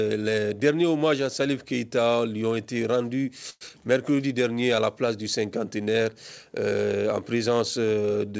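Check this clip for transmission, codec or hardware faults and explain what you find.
Three closely spaced transmission faults show up between about 3.5 and 4.2 s, all in the receive side of a call path whose output stops at 8 kHz, which fits G.722 at 64 kbps.

Call audio freeze, 3.50 to 3.63 s: the jitter buffer likely ran empty while packets were delayed. The last sound is stretched into a fading buzz for about 109 ms, including roughly 20 ms of silence, then resumes where it stopped with nothing lost.

Short concealed packet loss, 3.69 to 3.72 s: about 40 ms of audio arrived too late to decode, and the receiver cut its delay by around 30 ms. Only 8 ms of synthetic fill bridges the hole, so a brief smear or wobble replaces the missing sound.

Jitter buffer slow-down, 3.78 to 4.17 s: with its reserve depleted, the buffer rebuilt it by repeating single pitch periods and pause fragments. 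This adds 47 ms, so the audio plays at about 89% speed with unchanged pitch, sounding drawn out.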